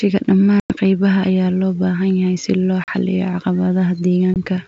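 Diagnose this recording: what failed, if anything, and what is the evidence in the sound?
Network stage: packet loss on an ADPCM call. Hard-edged silent gaps sit at 0.60–0.72 s (about 100 ms, several packets), 2.84–2.92 s (40 ms, a couple of packets) and 4.34 s (20 ms, a single packet). Each time, the decoder's predictor and step size come out of step with the sender's, so the speech returns slightly distorted before settling. The wideband G.722 path at 64 kbit/s is otherwise working normally.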